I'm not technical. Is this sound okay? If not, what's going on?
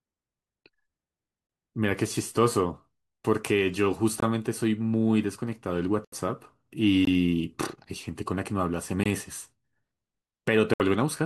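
No, there are two kinds of fault. First, a block of digital silence occurs three times: at 4.20 to 4.22 s, 6.05 to 6.12 s, and 9.04 to 9.06 s. The playback program most likely ran late filling its next chunk of audio, so that chunk came out as silence. The sound switches off and on instantly. The 21 ms gaps are very short holes. The longer 76 ms gap at 6.05 s is a brief hole in the speech.

Second, a digital broadcast dropout occurs from 10.74 to 10.80 s. The receiver lost part of the incoming digital signal, which fits two damaged or missing frames, so it muted for about 64 ms until good data arrived again. The speech drops out for that moment, and whatever was sent during it is lost rather than delayed.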